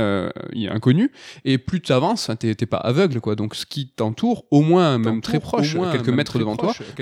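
At 5.04 s, after "qui t'entoure au moins", a doubled audio track begins abruptly: a dry copy trails about a second behind, somewhat quieter, running to the end, likely from a slower second capture path.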